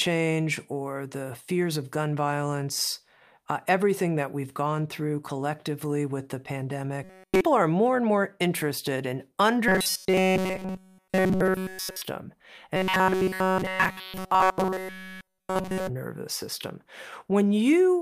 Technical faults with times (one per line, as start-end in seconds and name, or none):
7.04-7.41 robotic sound from repeated short buffers
9.68-12.02 robotic sound from repeated short buffers
12.76-15.89 robotic sound from repeated short buffers